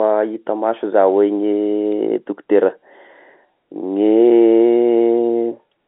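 No technical faults can be heard in this speech clip. It carries the narrow band of G.711 telephone coding, running from about 250 Hz to 3.7 kHz with nothing above roughly 3.8 kHz, as an A-law telephone line would deliver it.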